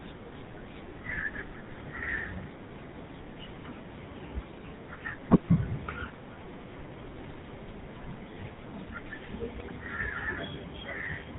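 A speech recording with a buzzy, gravelly roughness throughout and everything above 4 kHz missing. This is the GSM full-rate codec, which rebuilds the voice from a pulse-driven vocal-tract model, consistent with 13 kbps. From 9.55 to 9.71 s the voice breaks into squawks and gargling pops. These are GSM bit errors: corrupted filter, pitch and gain values warp the spectrum and level across several frames.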